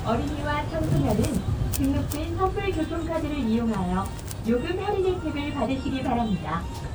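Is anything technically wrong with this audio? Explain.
Yes. Throughout the clip the sound has a swirly, watery texture with a hollow, scooped-out quality, and transients come across smeared rather than crisp. This is generation loss, likely from the audio being decoded and re-encoded as MP3 around five times, which fits a 128 kbit/s chain. Each pass quantises the signal again on a shifted frame grid, so the noise and missing spectral bands from every round pile up and blur the attacks.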